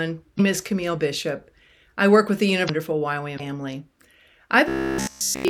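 Speech clip with damaged data in its compressed stream at three points: 0.36 to 0.40 s, 2.65 to 2.70 s just after "I work with the", and 3.36 to 3.40 s. Each time the decoder hits corrupted bytes, misreads or discards the frames, loses sync and hunts for the next valid frame header. That gap of roughly 40 ms is heard as a chirp, squawk, click or short hole. From 4.68 s to the end at 5.49 s the speech has robotic sound from repeated short buffers, likely because new audio stopped arriving in time and the playback side kept recycling its last fragment. Essentially all of that stretch is repeats, locked to a buzz at 66.7 Hz. That fits a repeated segment about 15 ms long. The voice becomes a rigid metallic drone that only loosely tracks the speech rhythm.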